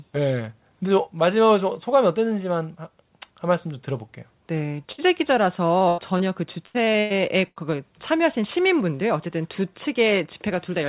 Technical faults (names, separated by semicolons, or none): burst of packet loss; short concealed packet loss; repeated packet loss (robotic sound)